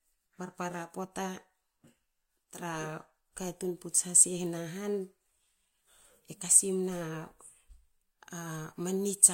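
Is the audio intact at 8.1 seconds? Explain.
Yes, at 8.1 seconds the speech is intact, with no dropout, click, distortion or other fault audible at that moment.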